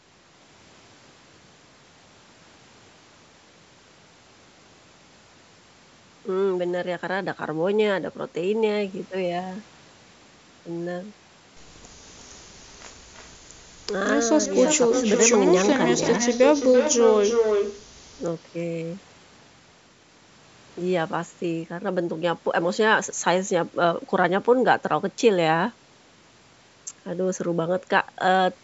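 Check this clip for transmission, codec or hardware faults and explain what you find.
There's an echo leak: faint scraps at 12.67–12.77, 13.12–13.35 and 13.54–13.68 s, then a strong copy from 14.46 to 17.86 s, trailing the speech by 339 ms, likely a loudspeaker's echo canceller letting its pickup slip back down the line.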